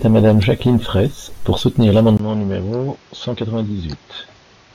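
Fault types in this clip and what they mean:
Input switched to a poorer device: from 2.17 s, after a 20 ms gap, speech turns duller, quieter, cut above 6.8 kHz with added noise, likely a lesser microphone taking over.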